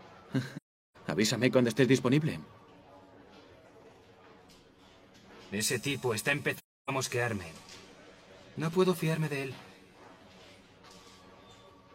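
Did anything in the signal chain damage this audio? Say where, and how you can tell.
Yes, at the codec: AAC frame loss with muting. Runs of frames were lost and the decoder zeroed their spectrum, so overlapping windows fade the sound out and back in. This leaves soft-edged holes at 0.56–0.97 s and 6.56–6.90 s, which fit runs of about nine and seven frames.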